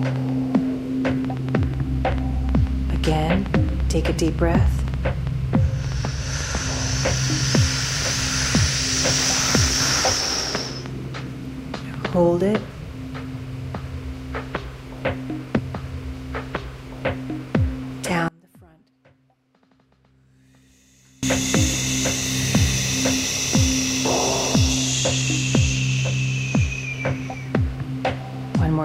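Between 0.03 and 12.14 s, something in the chain, likely electrical interference from nearby equipment or a faulty connection or power supply, injects a train of clicks into the audio. There are about 4.5 per second at an irregular pace, roughly fifty in all. Each has much the same shape and peaks around ten decibels above the underlying sound, so they come across as an uneven ticking that sits on top of everything and carries on through the quieter stretches.

From 15.57 to 17.57 s, the player fetched or queued the same piece of the stream twice. As a result, a stream segment is repeated: two seconds of material play a second time, and the timeline is pushed back by that amount. A small blip marks the point where playback jumps back to the earlier audio and starts the passage over.

From 18.28 to 21.23 s, one channel is inverted, most likely through a polarity reversal on one side. When the two channels are summed to mono, everything they share cancels, and the level falls by about 30 dB. 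Centred content almost disappears, leaving only the faint difference between left and right until normal polarity returns.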